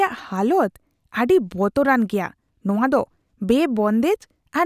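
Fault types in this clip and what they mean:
Nothing stood out on listening to this speech recording.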